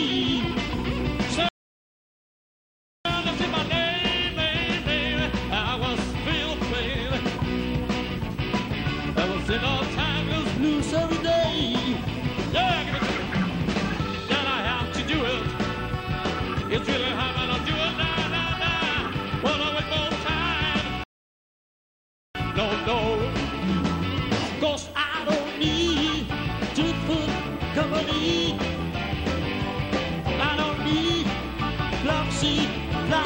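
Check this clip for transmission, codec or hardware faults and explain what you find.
Two rebuffering stalls occur. From 1.49 to 3.05 s and 21.04 to 22.35 s, playback ran dry and waited for data. The sound drops to silence, then resumes where it stopped, adding 1.57 s and 1.31 s.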